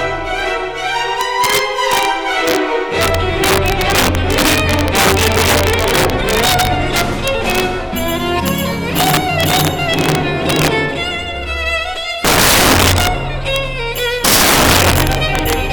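The audio carries integer overflow from start to finish. The signal is driven about 10 dB past the top of the integer range. Any sample beyond that ceiling wraps to the opposite sign instead of being held at the limit. Each such peak jumps across the full range in one step. Roughly 2 percent of samples are affected, all on the loudest moments. They come out as violent cracks, far sharper than ordinary clipping.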